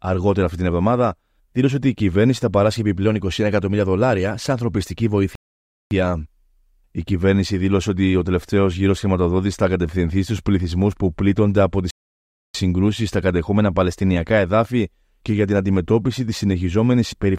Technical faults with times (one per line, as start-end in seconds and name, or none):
5.35-5.91 rebuffering stall
11.91-12.55 rebuffering stall